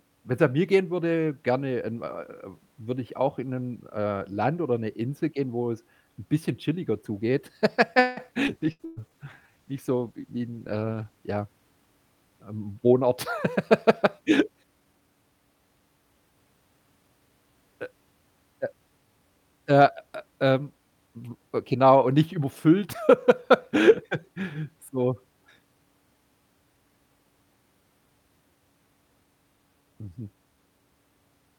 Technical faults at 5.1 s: none

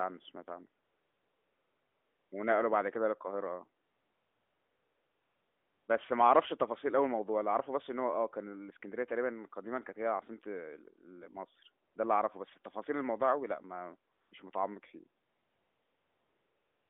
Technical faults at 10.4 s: none

